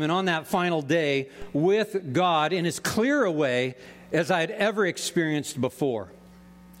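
A single DC step occurs at 1.42 s: the waveform's zero line jumps abruptly by about -29 dBFS, producing a brief low thump while the sound carries on unaffected. The offset then slides back toward zero as a 5 Hz high-pass drains it away. On a waveform this appears as a sudden vertical shift of the whole trace followed by a slow sag back; a spectrogram shows a thin broadband click at the step and a faint low-frequency smear beneath it.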